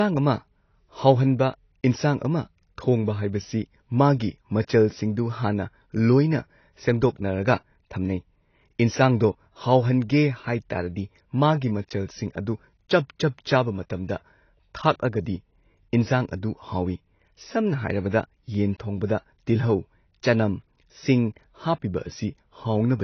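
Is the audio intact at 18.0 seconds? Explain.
No. From 17.64 to 18.64 s, one channel runs late by roughly a single sample, a few hundredths of a millisecond, and the two channels are summed to mono. That channel delay causes comb filtering: content common to both channels cancels where the offset puts them out of phase. With so tiny a lag, the first notch sits up near 20 kHz, so the effect is a dulling at the very top of the sound.

Running through the whole clip, including 18.0 s, is heavy compression, likely AAC-LC at a low bitrate around 24 kbps. The encoder coarsely quantises its frequency lines and discards the top band, leaving nothing above 6.6 kHz. The speech therefore sounds muffled and smeared, with plainly audible warbling and fizzy artefacts on sustained sounds and sibilants.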